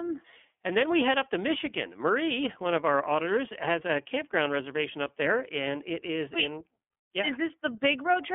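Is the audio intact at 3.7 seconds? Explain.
No, at 3.7 seconds the speech sounds thin, boxy and plainly rough, confined to roughly 250 Hz–3.4 kHz throughout: iLBC codec coding each 30 ms frame independently, consistent with its 13.33 kbps mode.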